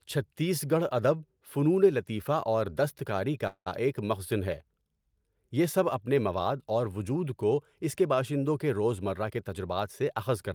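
At 3.47 s the speech stops and is replaced by a fading continuation of the last sound, ending in about 70 ms of silence before resuming at 3.68 s. This call audio freeze likely came from delayed packets emptying the jitter buffer, inserting a gap while losing nothing.

From 9.14 s to 10.44 s a jitter buffer speed-up runs the speech at 109% with unchanged pitch. The buffer had grown beyond its target, so the receiver trimmed repeated pitch-period fragments, around 150 ms in total, making the delivery sound hurried.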